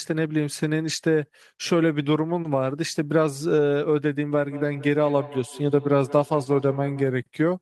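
From 4.33 to 7.17 s, feedback echo between two devices appears. Each word returns about every fifth of a second, peaking about 17 dB below the speech.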